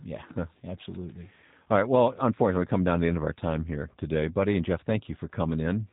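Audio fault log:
Throughout, G.729 codec: the speech is plainly rough and synthetic, with nothing above 3.8 kHz, which fits an 8 kbit/s G.729A link. Each 10 ms frame is rebuilt from a vocal tract filter, a pitch predictor and a few pulses, so fine detail is lost and the tone buzzes. A spectrogram shows a hard ceiling at 3.8 kHz, with smeared, blocky harmonics below.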